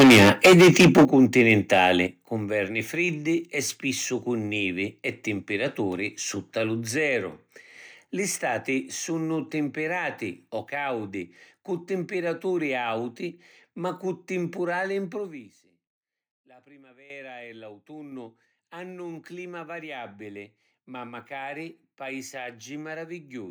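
From the start of the clip to 1.89 s, the loudest syllables carry a harsh, crackling edge: microphone overload, likely from the input volume being set high enough to drive the peaks about 12 dB past the converter's ceiling. Their tops are flattened on roughly a fifth of the samples.

Within that passage, at 1.05 s, voice and background drop together by about 11 dB. At 2.07 s, just before "cu nverni friddi e", they drop again by about 8 dB. Both are the microphone volume stepped down, likely the call software reacting to the clipping by cutting the device gain in single jumps.

From 15.1 to 15.64 s, right after "auti ma cu timpurali", the level falls by roughly 25 dB with a fine ticking riding on the sound. This is zipper noise: the fade is applied as about 100 unsmoothed increments per second, each leaving a small click.

At 17.1 s, speech and background jump up together by about 12 dB, an abrupt microphone volume stepped up where the input gain was raised in one step rather than ramped.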